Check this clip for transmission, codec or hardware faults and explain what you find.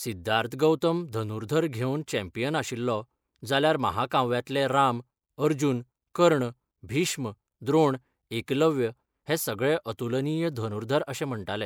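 Nothing wrong can be heard anywhere in the recording.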